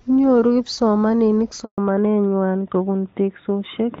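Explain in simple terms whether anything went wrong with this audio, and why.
At 1.64 s the sound cuts out completely for 140 ms, until 1.78 s. This is a handover gap: the phone switched the call to a different network, and no audio arrived during the switch, so whatever was said in that moment is gone.

From 1.78 s to the end, the call has fallen back to narrowband. Before the gap it ran on the HD Voice (AMR wideband) codec, with clear, full sound. Afterwards an older codec carries it, so nothing above 4 kHz remains, and speech sounds duller and more muffled.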